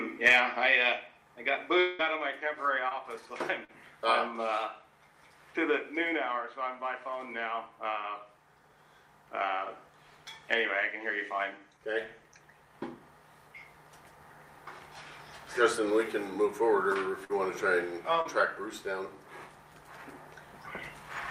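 From 1.79 to 2.01 s, a stretch of about 200 ms is replaced by a continuation of the preceding sound that fades as it runs, with no fall to silence. The audio then picks up later, without the lost portion. This is likely a long network dropout.

Short concealed packet loss occurs at 2.89 to 2.93 s and 3.65 to 3.71 s. In each case about 20 ms and then 40 ms of audio failed to reach the decoder in time. The receiver bridged the hole by extending the last sound and blending back, leaving a brief smear.

At 17.25 to 17.31 s, a burst of packet loss removes about 40 ms of audio. Concealment fills roughly 48 ms by carrying the previous sound forward while lowering its level. Playback then resumes further on, so the material in between is absent.

At 18.21 to 18.27 s, another short concealed packet loss drops about 40 ms, patched by about 35 ms of extrapolated sound that merges back into the real signal as a short wobble.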